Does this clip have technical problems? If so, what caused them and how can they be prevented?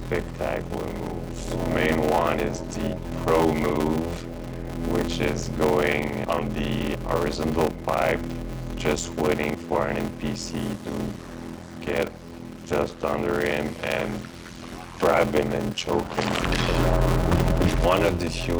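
Yes. A block size mismatch (padded) runs throughout. A steady buzz at about 86.1 Hz sits under the sound, and everything plays at 0.625 times normal speed while keeping roughly its original pitch. This fits a stage writing 320-sample blocks into one that reads 512. The missing samples in each block are filled with zeros, so a short gap repeats at the block rate. To prevent it, match the write and read block sizes, or buffer between stages instead of zero-padding.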